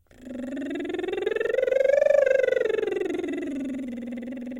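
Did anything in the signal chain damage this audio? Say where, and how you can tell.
No, no signal-chain damage heard.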